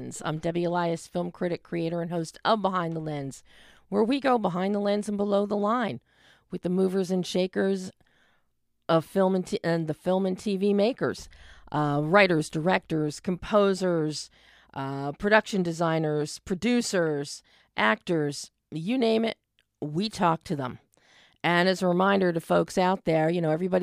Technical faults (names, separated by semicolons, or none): none